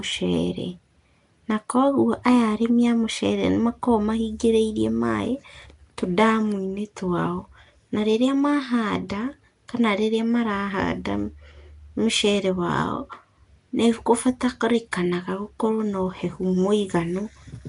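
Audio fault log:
throughout: Nellymoser compression, likely the cause of the rough, hissy halo and smeared, underwater quality; weak bands are noise-filled, and nothing is present above 10.6 kHz.
14.92 s: pre-echo, a brief hiss spreading about 11 ms ahead of a sharp attack, because block-wide quantisation noise fills the quiet moment before the onset.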